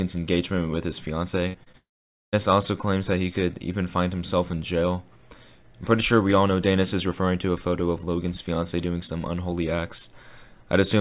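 Narrowband audio carried over a call path, with nothing above 4 kHz, which fits G.711 mu-law at 64 kbps, is hit by a cluster of packet-loss faults between 1.48 and 2.35 s. The first is a burst of packet loss from 1.48 to 1.56 s. About 60 ms of audio failed to arrive in time, and the receiver bridged the hole by extending the last sound and lowering its level, giving a held, decaying tone or hiss before the audio picks up again with that stretch gone. Two instances of short concealed packet loss follow, at 1.64 to 1.68 s and 1.72 to 1.75 s, each missing roughly 20 ms. In both, the decoder synthesised a short continuation of the preceding sound and crossfaded back into the real signal, so each is heard as a brief smear or wobble rather than a clean gap. The most serious fault is a long network dropout from 1.77 to 2.35 s, covering about 0.56 s. There is a short fading continuation of the last sound, then roughly half a second of silence until audio resumes further along, with the intervening content never played. 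The cause is likely a network interruption in which no packets reached the receiver for that whole interval.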